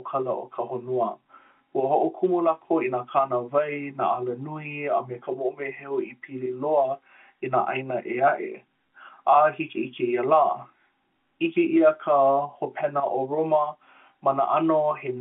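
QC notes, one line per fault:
Nothing to flag here: the speech comes over as ordinary telephone-line audio, band-limited the way a G.711 call is, with no faults anywhere.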